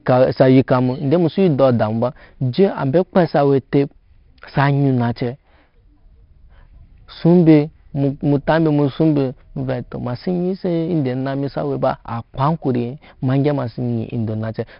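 Throughout the speech, 4-bit ADPCM compression leaves a heavy gritty hiss riding on every loud syllable and roughens sharp onsets. Nothing sits above 5.3 kHz, pointing to a low sample rate, with a bitrate near 44 kbps. A spectrogram shows level-tracking broadband noise under a flat ceiling.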